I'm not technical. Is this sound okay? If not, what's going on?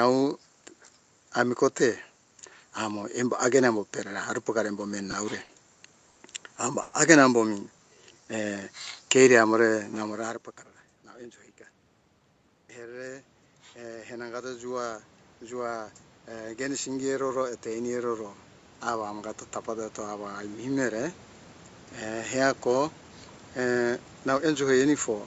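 No, the sound has several problems, all from the call connection or its level control.

Between 5.11 and 6.19 s there are three short stalls from a late packet, at 5.11, 5.44 and 6.09 s. Each time, a piece of audio reached the receiver late, so it held the last sound a little longer while it waited: about 20, 50 and 70 ms. Nothing is lost, but a sound drags briefly, sometimes with a faint buzz.

From 6.82 to 6.96 s there is a longer hold of about 110 ms, a call audio freeze. The sound is stretched into a fading buzz rather than going silent, then resumes where it left off. The likely cause is packets held up on the network, which left the receiver with nothing to play for that moment.

From 7.79 to 8.36 s the receiver applies a jitter buffer slow-down. It was short of stored audio, so it repeated tiny slices of the sound to build a reserve. Playback runs at about 91% speed, adding roughly 60 ms. 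The pitch stays the same, but sounds are drawn out and may waver slightly.

From 10.24 to 11.05 s the opposite happens, a jitter buffer speed-up. The receiver had built up too much delayed audio and trimmed tiny slices to catch up. It removes about 150 ms in total, so playback runs at about 116% speed and sounds hurried at the same pitch. Around 10 s the talker also seems to shift position at the microphone, which is normal.

From 12.74 to 22.42 s there is automatic gain rising. The incoming level dropped, and the call's automatic volume control slowly turned itself up over nearly ten seconds to compensate. The voice and the background noise swell together gradually, rather than the voice alone getting louder.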